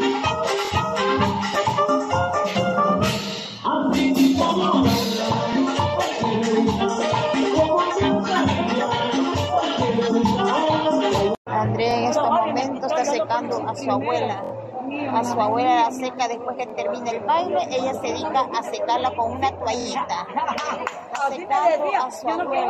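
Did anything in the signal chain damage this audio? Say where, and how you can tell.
Yes, a repeated buffer in the driver or buffer stage. A 23 ms slice stutters with hard joins at 0.65, 5.53, 11.91, 14.44, 16.70 and 19.81 s. That fits a 1024-sample buffer.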